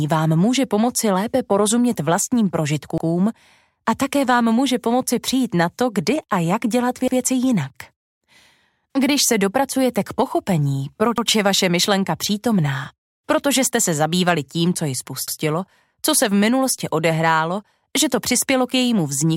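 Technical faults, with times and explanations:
2.98–3.08 s, 7.08–7.18 s, 11.18–11.28 s, 15.28–15.38 s: overlapping chunks. A regular stutter or click where 100 ms of audio plays twice. The audio was handled in 4 s chunks, each starting 100 ms before the previous one ended, so every join repeats that stretch.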